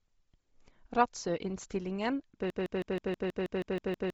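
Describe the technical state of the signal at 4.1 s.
At 4.1 s the signal is inside a broken-record loop that begins at 2.50 s and runs to the end of the clip. A 0.16 s fragment of speech repeats exactly and back to back, so the voice stutters in a rigid mechanical cycle rather than moving forward. Whatever should have been heard after 2.50 s is missing. The likely cause is a stalled player, encoder or stream that kept resending the last chunk in its buffer.

Across the whole clip, including this moment, there is also heavy damage typical of Bluetooth LC3 compression. Nothing is present above 7.7 kHz, and the upper band that remains sounds breathy and grainy, as if noise had been painted in where detail was discarded. This pattern most likely comes from LE Audio's transform codec running at a low bitrate, which fits around 24 kbps with short 7.5 ms frames.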